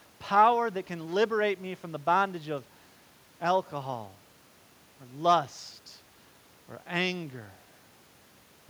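No technical faults can be heard anywhere in the recording. With no events to place in time, there is nothing to describe in sequence.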